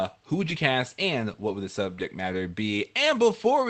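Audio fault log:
0.41–0.55 s and 1.99–2.01 s, lost packet rebuilt from error correction: the first stretch, about 140 ms, sounds like four separate 20 ms frames played from the low-bitrate redundant copy carried in the following packets. The second is a single 20 ms frame. Both have no gap, but the audio turns rougher and noisier before clean decoding resumes.
1.95–1.99 s, short concealed packet loss: this audio never reached the decoder in time, and no redundant copy covered it. The receiver extrapolated from the preceding sound and crossfaded back, producing a brief smear. The error-corrected frame at 1.99 s follows directly, and the clip's 8 kHz call bandwidth is audible throughout.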